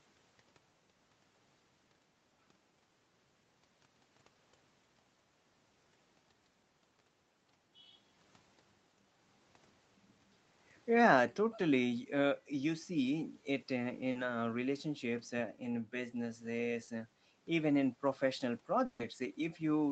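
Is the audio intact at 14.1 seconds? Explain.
No. From 14.11 to 14.17 s there is a short concealed packet loss: about 40 ms of the call's audio did not reach the decoder in time, and the receiver synthesised a replacement by extending the preceding sound, following its pitch where it was voiced and using shaped noise where it was not, before crossfading back into the real signal. It is heard as a brief smear or wobble, and a short consonant there may drop out.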